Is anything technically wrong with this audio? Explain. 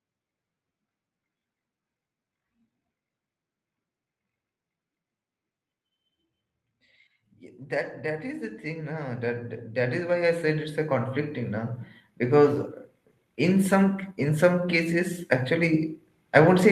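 Yes, there's an automatic gain rising problem. From about 8.04 s to 12.65 s the level creeps up by about 16 dB. The gain control decided the input was too quiet and kept turning it up, so the speech and the background noise swell together over those four and a half seconds instead of jumping. You hear the room getting louder right along with the talker. This is all going through a call path that caps the top end around 8 kHz.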